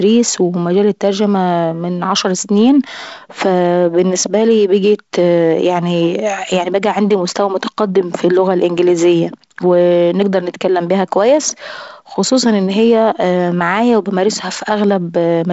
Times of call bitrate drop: none

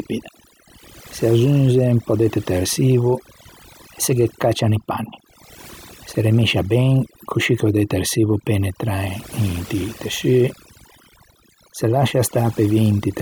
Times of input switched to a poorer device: none

